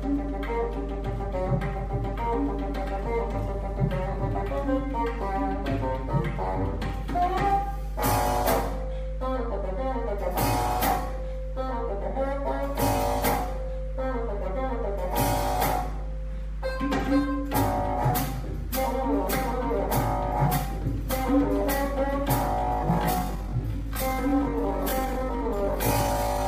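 There's a steady 50 Hz mains hum running under the whole recording, and it's strong, sitting only a few decibels below the audio itself. That's power-line interference getting into the signal, the sort of thing a ground loop or a transformer near the gear puts there. Then from 22.51 s to 26.47 s the pace drops to about 0.63 times normal while the pitch holds, so that stretch drags. That's a time-stretched section, likely from software slowing it to fill a length by repeating short slices.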